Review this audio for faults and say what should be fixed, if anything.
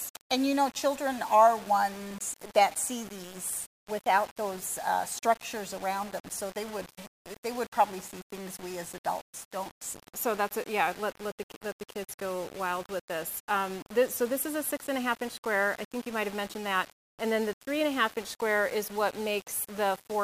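Throughout the clip, the sound carries a grainy, gritty distortion that rises and falls with the signal and is harshest in quiet passages. The likely cause is low bit depth without dither. The error sits only around 20 dB below the signal, which fits rounding to about 6 bits. On a waveform, quiet stretches show visible staircase steps. On a spectrogram, a broadband haze tracks the signal's level rather than forming a steady noise floor. To prevent it, keep at least 16 bits and always apply dither when reducing word length.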